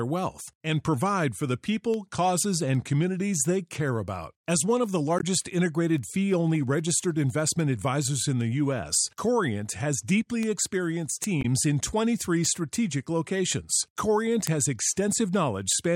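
A speech clip with two short hits of damaged data in a compressed stream, one from about 5.19 to 5.24 s and another from 11.41 to 11.45 s, each only around 40 to 50 ms long. You hear them as quick glitches cutting into the speech. Data in the compressed stream was corrupted there, so the decoder couldn't make sense of those frames and lost sync briefly before locking onto the next valid frame header.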